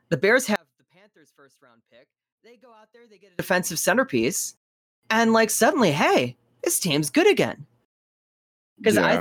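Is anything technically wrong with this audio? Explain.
Yes. One channel inverted, from 0.56 to 3.39 s: the speech collapses to a faint trace, about 34 dB down, before returning just ahead of "centerpiece and like suddenly". The likely cause is one stereo channel with flipped polarity, so when the two sides are summed to mono the centred speech, common to both, cancels almost entirely. Only the small difference between the channels survives, leaving a weak residue instead of the full voice.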